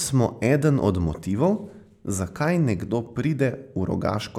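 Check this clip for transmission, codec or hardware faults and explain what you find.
Checking this clip turns up no faults to explain.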